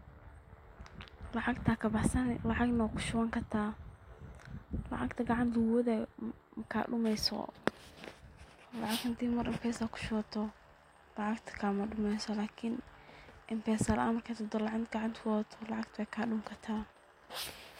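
No technical faults are audible anywhere in the recording.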